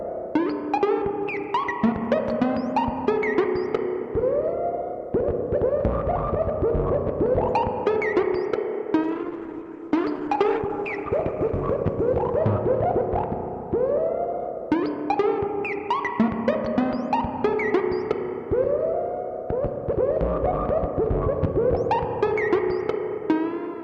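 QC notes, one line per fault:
1.18–3.78 s: Wi-Fi interference. A steady tick repeats every 102.4 ms, about ten times a second, sitting roughly 40 dB below the main sound. A nearby Wi-Fi radio's beacon bursts are being rectified by the audio circuitry and turned into audible clicks. On a spectrogram it appears as thin, evenly spaced vertical lines spanning a broad frequency range. In the waveform, small regular spikes ride on top of the signal.
9.05–15.45 s: call bitrate drop. The sound turns coarse and somewhat watery, and its top end is muffled. The texture fits the encoder being squeezed from about 64 kbps down to about 11 kbps, with the worst stretch lasting 1.59 s. At that low rate the codec quantises more crudely and limits bandwidth from 20 kHz to 12 kHz. A spectrogram shows a hard ceiling at 12 kHz and blotchy, smeared detail below it until the full range returns.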